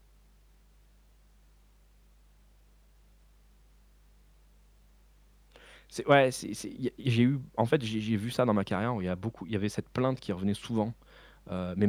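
Mains hum runs under the speech from start to finish. It is a steady low tone at 50 Hz, with a few low harmonics above it. It sits roughly 30 dB below the speech. The power line has leaked into the signal path. A ground loop or a transformer near the recording chain would do this. The hum does not change over the clip.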